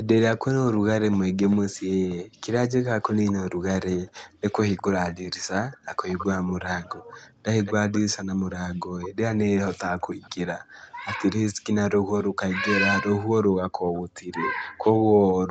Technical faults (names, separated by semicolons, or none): echo leak